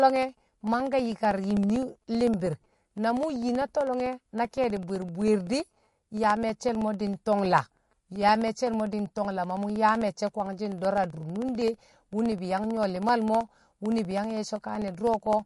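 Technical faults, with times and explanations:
throughout, MP3 compression: The speech sounds watery and swirly, with s sounds turning metallic and chirpy, consonant attacks smeared, and nothing heard above 11.3 kHz. The likely cause is low-bitrate MP3 encoding at around 48 kbps. With so few bits to spend, the encoder cuts the treble at a fixed point and discards quiet frequency components, which then flicker on and off from frame to frame and produce the swirl.
0.1 to 15.4 s, periodic USB or driver dropouts: A steady train of small ticks runs through the speech every 64 ms, roughly fifteen a second and around two hundred in all, heard only where there is sound. Each tick is a gap of about a millisecond where audio was lost and replaced by silence. This happens when a background task stalls the USB bus or the audio driver at a fixed interval, giving the clicks their even rhythm.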